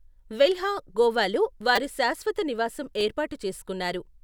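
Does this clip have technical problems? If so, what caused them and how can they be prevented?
Yes. A repeated buffer occurred: fresh audio arrived late, so the device replayed its last small block, which fits a 5 ms buffer. Between "వెల్హా గోవాలో" and "శాశ్వత నివాసం", that block loops several times from 1.76 to 1.78 s, producing a brief buzz. After "శాశ్వత నివాసం", a single replay at 3.01 s makes a click. To prevent it, use a larger playback buffer or give the audio thread higher scheduling priority so data always arrives on time.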